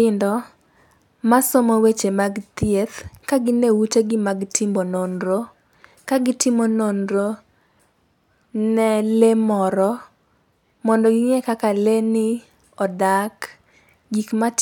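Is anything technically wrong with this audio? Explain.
No, nothing technically wrong can be heard here.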